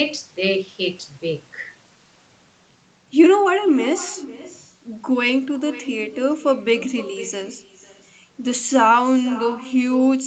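All the way through there's echo with no canceller: the far end's speaker leaks back into its mic, so every phrase returns about half a second later, roughly 17 dB down.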